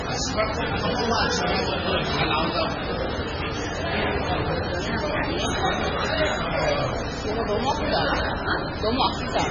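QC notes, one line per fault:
throughout: computer activity noise. A buzz pulsing at roughly 100 times a second sits around 30 dB below the sound, rising and falling with the machine's workload rather than with the audio, as processor or graphics load shifts the audio circuit's shared ground.
throughout: MP3 compression. The audio is heavily watery and swirly, with nothing above about 9.8 kHz. This is likely MP3 encoding at a very low bitrate, fitting 16 kbps, where starved frequency lines switch on and off between frames and the treble is cut.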